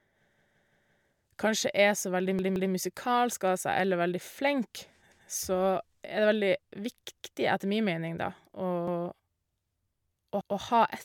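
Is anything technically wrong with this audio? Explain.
Yes, there are repeated buffer faults. They occur at 0.34 to 1.02 s (four extra plays), at 2.39 to 2.73 s just after "så veldig" (two extra plays), and once each at 5.12, 7.17, 8.88 and 10.41 s. New audio arrived late, so the device replayed its last 171 ms block, which fits an 8192-sample buffer. The speech stutters with a hard join at each repeat, and almost nothing is lost. On a waveform, identical 171 ms segments sit side by side. A spectrogram shows the same pattern copied, with a vertical seam at each join.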